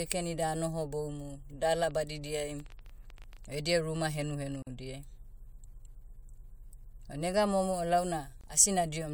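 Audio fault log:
1.91–3.56 s, train of clicks: A run of roughly 15 similar clicks ticks over the speech at about 9.7 per second. The spacing is irregular, and the peaks reach about the level of the speech itself. This is likely interference from nearby equipment or a faulty connection or power supply. Unlike scattered crackle or a single pop, the clicks share one shape, keep coming for over a second and a half, and sit on top of the sound rather than replacing any of it.
4.62–4.67 s and 8.41–8.44 s, gap at a join of encoded pieces: The continuous sound breaks with a gap of 44.5 ms and then of 24.8 ms. Each time it resumes exactly where it stopped. These are joins between separately encoded segments, where each run's start-up delay and padded final frame were left in. A dropout or packet loss removes sound. Here nothing is skipped, and the codec smears the edges of the silence.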